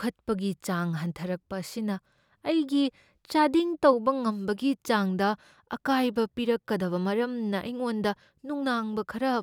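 No technical faults can be heard anywhere in the recording; the signal stays continuous and steady throughout.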